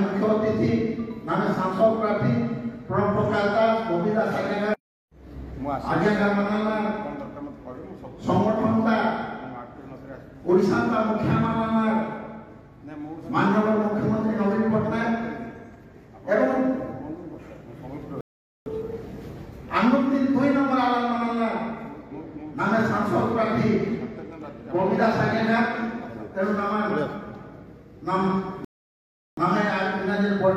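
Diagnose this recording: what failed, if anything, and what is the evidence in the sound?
The failure is at the network and playback stage: two rebuffering stalls. At 18.21 s the sound drops to silence for 0.45 s and picks up again at 18.66 s. At 28.65 s it stops again, this time for 0.73 s, resuming at 29.37 s. Each time the audio continues exactly where it left off. Nothing is skipped. The player's buffer ran dry, so playback halted until more data arrived. The stalls add time but lose no audio.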